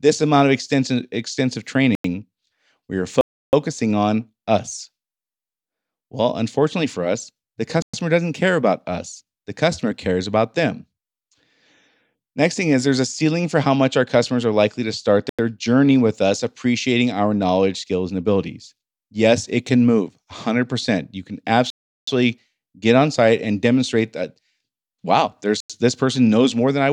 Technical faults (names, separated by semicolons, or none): block of digital silence